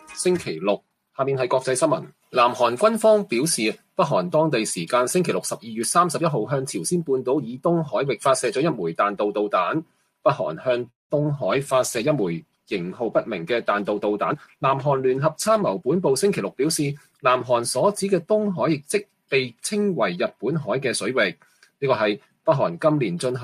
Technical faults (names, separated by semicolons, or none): call audio freeze; short concealed packet loss; call bitrate drop; jitter buffer speed-up; sound cut by the noise suppressor